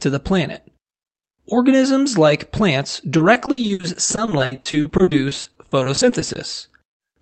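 Speech heard through a call path whose band tops out near 8 kHz. Right after "like plants", from 3.17 to 6.37 s, repeated packet loss makes it choppy and robotic. Dozens of gaps up to 60 ms, roughly 30% of that stretch, are each patched by stretching the preceding sound. That gives a rapid stutter rather than the single clean hole of one isolated dropout.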